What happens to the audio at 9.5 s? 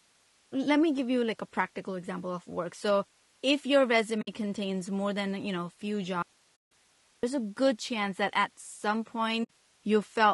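A short gap opens from 9.43 to 9.50 s: AAC frame loss with muting. The decoder zeroed the missing spectrum, and the overlapping windows fade the sound out and back in, which fits about three lost frames. Unlike a hard dropout, the edges are soft.

Underneath, as across the whole clip, the speech is plainly rough and grainy, with noise between the harmonics and a thin, synthetic top band. This is likely low-delay AAC compression at a low bitrate, around 32 kbps. Unlike the muting, it is a constant texture rather than a hole.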